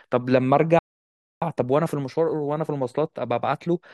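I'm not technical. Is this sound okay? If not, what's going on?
No. At 0.79 s the speech cuts out and stays silent until 1.42 s, a gap of about 0.63 seconds. That is a playback stall: the player stopped producing sound partway through. The likely cause is that the player ran short of incoming data, or its processing was briefly held up, so it had nothing to send to the speakers until it recovered and picked up again.

From 1.42 s to the end at about 3.9 s, the speech runs roughly 1.1 times faster than normal while keeping its usual pitch. This is time-compressed catch-up. After the gap, the player is behind, so it trims out tiny slices of the sound and blends the joins together to close the delay. Those small cuts are what make it feel hurried.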